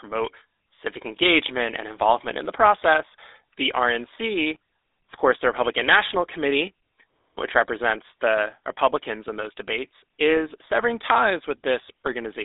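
Speech that has been through the GSM full-rate codec for its whole length, with coding damage that is plainly audible. The codec rebuilds the voice from a vocal-tract model excited by coarse, regularly spaced pulses, at a rate that fits the 13 kbps full-rate mode. This leaves a buzzy, gravelly roughness on the voice. The line band runs from roughly 300 Hz to 3.7 kHz, and nothing survives above 3.8 kHz, so sibilants and brightness are gone.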